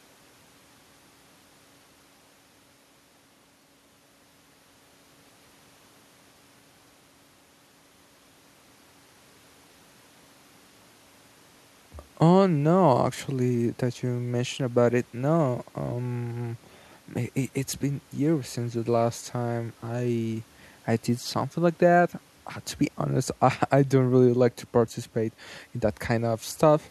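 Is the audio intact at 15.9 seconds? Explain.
Yes, the audio is intact at 15.9 seconds, with no fault present at that moment.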